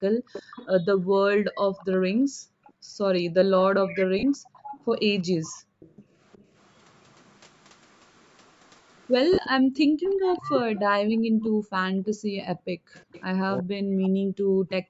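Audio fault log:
0.15–1.12 s, 2.72–6.16 s and 9.62–12.93 s: background gated by the echo canceller. The room tone ducks by as much as about 40 dB in short dips, adding up to roughly 0.4 s in the first span and about a second in each of the later two. The canceller clamps the microphone whenever the far end plays through the loudspeaker, then releases it, so the noise floor pumps in and out instead of staying steady.
0.33–6.8 s and 8.65–13.23 s: echo leak. A delayed copy of the far-end talker returns about 365 ms behind the original. It sits roughly 15 dB under the speech in the first span and roughly 10 dB under it in the second, where it is more obvious. The likely cause is an echo canceller on the loudspeaker side that did not fully remove what its microphone picked up, so the residue was sent back down the line.
2.34–2.42 s, 11.51–11.56 s and 13.6–14.9 s: speech suppressed in double talk. 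The near talker's level drops sharply, by around 40 dB at worst. The first two events are brief cut-outs of about 70 ms and 50 ms. The last one runs to the end of the clip, with roughly a second of it affected. Both sides are talking at once here, and the canceller likely cannot separate its own talker from the echo, so it attenuates both.
4.19–4.23 s and 9.33–9.38 s: lost LE Audio frames. Gaps of 40 ms and 50 ms, which fits four and five lost 10 ms LC3 frames. The decoder fills each gap by repeating the last spectrum with randomised phase, so the sound turns into a short noisy smear and fades toward silence rather than cutting off cleanly.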